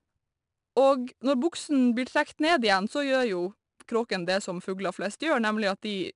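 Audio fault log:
throughout, 4-bit ADPCM compression: each sample is coded as a 4-bit step from a prediction, with the step size adapting behind the signal, which fits a stream near 89 kbps. The speech carries plainly audible gritty hiss that tracks its loudness, roughened onsets, and nothing above 10.6 kHz.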